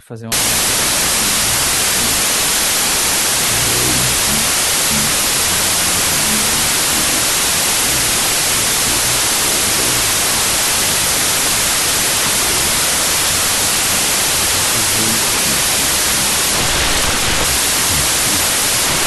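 This speech clip suffers from wrong sample width from 0.32 s to the end: the sound points to 32-bit samples being read as 16-bit, splitting each into two values. Loud hiss buries the speech, which plays at half speed, an octave low.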